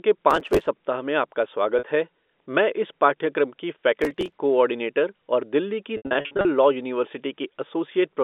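Processor overload crackle at 0.31 to 0.67 s, just before "में आपका": dozens of sub-millisecond audio buffers missed their deadlines and were skipped, leaving a gritty burst of hard-edged gaps.

Packet loss with pitch repetition at 1.79 to 1.83 s, between "में आपका" and "है मैं": a 40 ms gap, consistent with two 20 ms packets, was bridged by repeating the last pitch period, giving a briefly held, buzzy tone.

Processor overload crackle again at 4.02 to 4.36 s: the same run of skipped, sub-millisecond buffers tears through the speech as crackle until the load eases.

Packet loss with pitch repetition at 5.97 to 6.45 s, after "कोऑर्डिनेटर और दिल्ली की": about 300 ms of audio is lost in scattered gaps, the longest 80 ms. Repeated pitch periods buzz, fade toward silence in the longer gaps, then cross-fade back into the speech.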